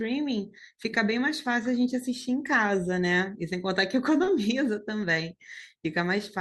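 Speech, with one short concealed packet loss from 4.23 to 4.29 s: about 40 ms of audio failed to arrive, and the decoder covered it by stretching the preceding sound. A spectrogram shows harmonics or noise smeared flat across the gap, then a cross-fade back.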